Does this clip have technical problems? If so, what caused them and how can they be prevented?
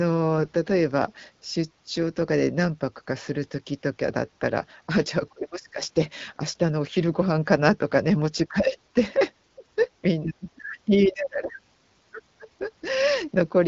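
Yes, there's one. From 0.37 to 0.49 s the speech turns hoarse and gargly: AMR bit errors, with flipped low-priority bits (around three percent) slipping past the checksum and scrambling pulses, gain and spectrum across what sounds like six 20 ms frames. A stronger radio link or better error protection would prevent it.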